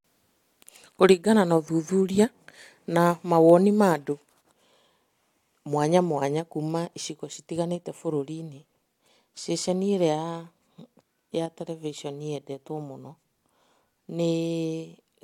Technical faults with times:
none

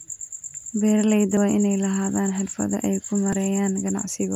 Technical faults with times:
1.37 audio missing between chunks
3.33 audio missing between chunks

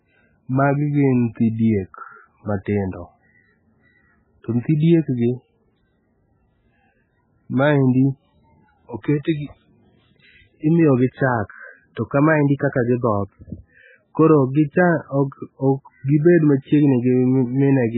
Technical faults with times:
0.00-17.97 MP3 compression

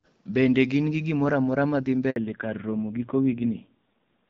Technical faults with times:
2.10-2.16 handover gap
2.16-4.29 fallback to narrowband

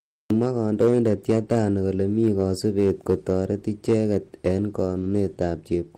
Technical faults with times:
4.85-5.11 lost packet rebuilt from error correction

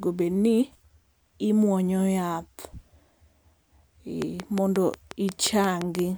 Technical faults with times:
4.22-6.00 train of clicks

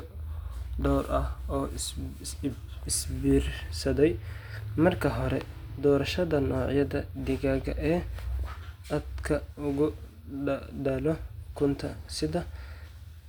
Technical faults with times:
none

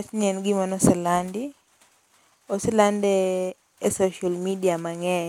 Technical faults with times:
none

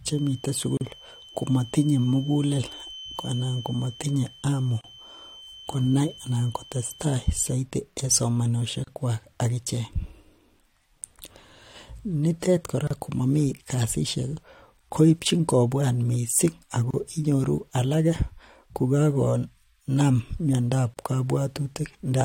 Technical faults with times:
0.00-7.61 feedback whistle
0.77-0.81 gap at a join of encoded pieces
4.81-4.84 gap at a join of encoded pieces
8.84-8.87 gap at a join of encoded pieces
12.87-12.91 gap at a join of encoded pieces
16.91-16.94 gap at a join of encoded pieces
20.94-20.97 gap at a join of encoded pieces

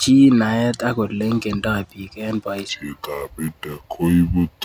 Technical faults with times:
2.69-4.64 wrong sample rate

